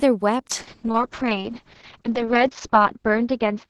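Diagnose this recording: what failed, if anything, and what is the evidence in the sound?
From 0.55 s to the end of the speech, a call bitrate drop shows up at the codec stage, driven by the network's bandwidth estimate. The top of the spectrum falls from 12 kHz to 6 kHz, which fits Opus dropping from 32 kbps to about 6 kbps. The speech turns muffled and coarsely grainy and stays at its worst for 1.52 s without recovering. A packet-loss fault would instead give gaps or smeared repeats.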